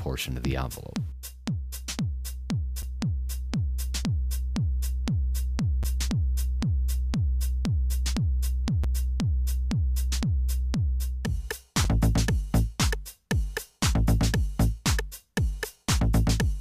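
The audio has a gap between chunks: hard-edged dropouts of about 7 ms at 2.82, 5.83, 8.84 and 11.84 s, every 3 s, where separately delivered chunks were joined with silence. The waveform shows flat, near-silent stretches; the spectrogram shows thin, full-height blank stripes.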